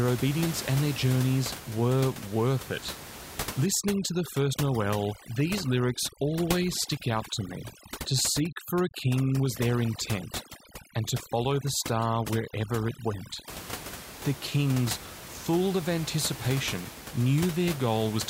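From 3.66 to 13.5 s, overdone noise removal sets in: a noise reducer set too strong shuts off frequency bands near its noise estimate, taking quiet speech detail with them. The room noise drops and breaks up into twinkling specks.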